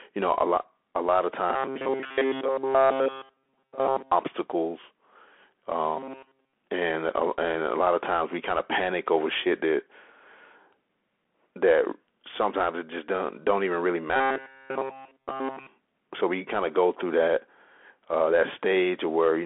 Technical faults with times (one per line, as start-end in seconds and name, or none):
0.00-19.45 Bluetooth CVSD headset codec
1.50-4.12 robotic sound from repeated short buffers
5.97-6.53 robotic sound from repeated short buffers
14.16-15.67 robotic sound from repeated short buffers